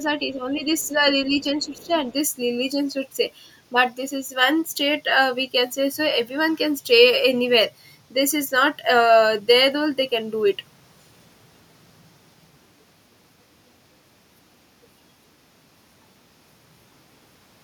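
The speech clip has echo-canceller trouble in its first two seconds. Speech suppressed in double talk: with both sides likely talking at once, the canceller turned the talker down along with the loudspeaker echo. The voice dips slightly from 0.08 to 1.07 s, then more deeply, by about 15 dB, from 1.24 to 1.95 s. Other side's voice leaking through: the canceller likely left part of the far voice in the microphone signal. It is heard as a faint scrap from 0.79 to 0.87 s and a slightly stronger stretch from 1.63 to 1.98 s, both well below the talker.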